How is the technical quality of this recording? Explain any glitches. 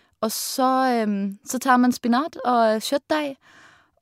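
The technical quality of this recording is good, with no glitches to explain.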